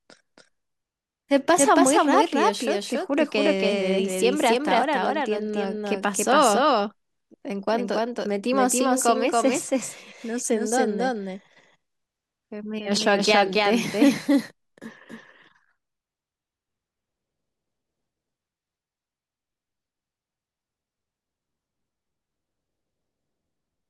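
Speech runs with a doubled audio track throughout: a second, full-band copy trails the original by around 300 ms at roughly equal loudness, so every syllable is followed by a dry, undecayed repeat with no room colour. On a waveform each burst of energy appears twice, the same shape shifted by that fixed gap; a spectrogram shows every formant pattern duplicated side by side. The likely cause is the same signal captured a second time through a slower path.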